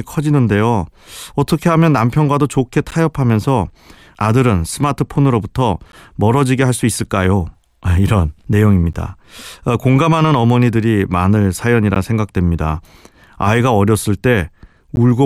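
Gaps between chunks occur at 2.91, 5.92, 8.93, 11.95 and 14.96 s. The speech arrives in 3-second chunks with about 13 ms of silence inserted at each join, so nothing is lost, but the flow is cut by brief, hard-edged holes at a steady rhythm.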